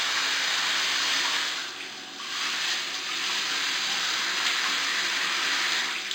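From start to finish the audio carries imaging from linear upsampling. The rate was raised from 11 kHz to 48 kHz by joining samples with straight lines, which filters poorly. The original band stops near 5.5 kHz and sounds dulled at its top, while a mirrored copy fills roughly 5.5 to 11 kHz, only about 10 dB down, adding a faint metallic shimmer. A spectrogram shows the content reflected upward across the 5.5 kHz line.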